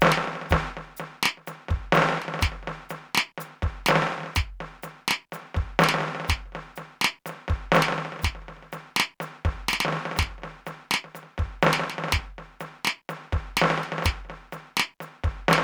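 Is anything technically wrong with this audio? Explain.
No, there's nothing technically wrong with this music that I can hear; it all sounds just as it should.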